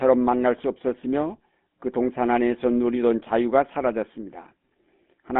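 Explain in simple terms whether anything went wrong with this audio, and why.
GSM full-rate codec damage runs through the whole clip. This old phone codec rebuilds speech from a simple throat-and-mouth model driven by sparse pulses, which leaves the voice buzzy and gravelly. Nothing outside roughly 200 Hz to 3.5 kHz survives, so it sounds thin and muffled.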